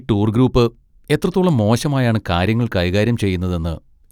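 No technical faults can be heard.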